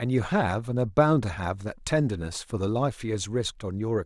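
No technical faults occur at any point in the speech, so there is nothing to describe in time order.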